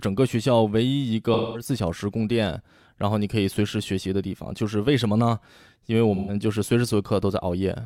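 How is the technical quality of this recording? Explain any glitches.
The recording has two short dropouts in the speech, both from AAC frame loss with concealment. Between 1.33 and 1.69 s, and again between 6.16 and 6.35 s, compressed AAC frames went missing, which fits roughly five and then three lost frames. The decoder covered each gap by rebuilding sound from the last good spectrum, so these patches come out smeared, noisy or phasey.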